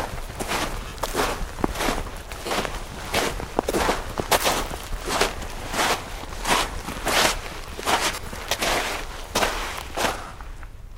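Lost LE Audio frames cause brief noisy smears at 0.88, 2.47, 5.13, 8.12 to 8.26 and 10.27 s. The LC3 decoder patches each gap by repeating the last spectrum with scrambled signs.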